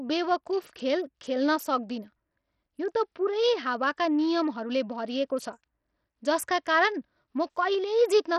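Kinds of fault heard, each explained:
Bluetooth SBC compression: The speech sounds gritty and coarse throughout, with unsteady, flickering treble and nothing above 17.2 kHz. This is likely SBC coding with a small bit pool, which starves the upper sub-bands and crudely quantises the rest, consistent with a bitrate near 64 kbps.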